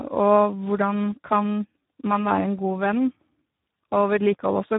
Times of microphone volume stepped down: none

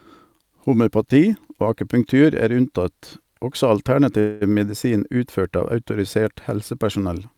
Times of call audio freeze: 4.19-4.43

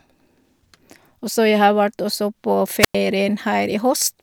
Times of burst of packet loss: none

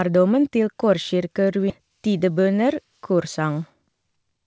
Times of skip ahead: 1.70

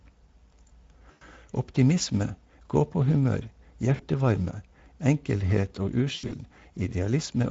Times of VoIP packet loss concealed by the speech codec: 1.11-1.23, 3.95-4.05, 6.15-6.33

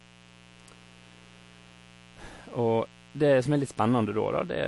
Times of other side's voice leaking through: none

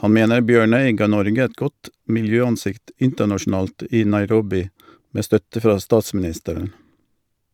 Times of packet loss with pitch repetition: none

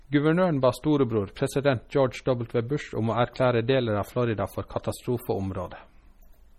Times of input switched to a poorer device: none

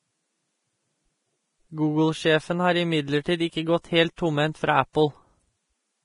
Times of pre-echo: 3.23-3.26, 4.16, 4.93

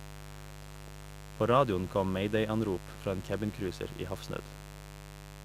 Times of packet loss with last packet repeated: none

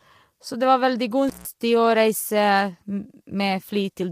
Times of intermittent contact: 1.28-1.46

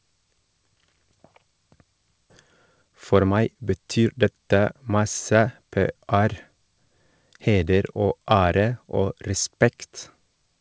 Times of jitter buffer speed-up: 2.75-4.32

